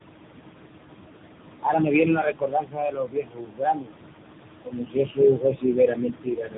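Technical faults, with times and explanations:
Throughout, noise suppressor artifacts: The room noise, about 8 dB below the speech, is pulled down by about 21 dB in the pauses and swells back under speech. On a spectrogram the noise floor pumps frame by frame into patchy, blotchy gaps.
Throughout, tandem speech coding: The speech went through two speech codecs in a row. The sound points to ADPCM at about 24 kbit/s, a G.711 link, and then AMR-NB at around 6.7 kbit/s. Each stage recoded the last one's errors, so the speech is rough, muffled and warbly. A spectrogram shows nothing above 3.8 kHz and smeared formants.
1.63–3.99 s, 4.64–5.19 s and 5.35–6.58 s, speech cut by the noise suppressor: In these stretches the suppressor treated parts of the speech as noise and turned them down, by about 22 dB in the first run and about 19 dB in the later two. The affected parts add up to roughly two seconds, under half a second, and about a second. 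The affected speech sounds swallowed or faint. The waveform shows dips in the envelope, and the spectrogram shows faded high-frequency detail.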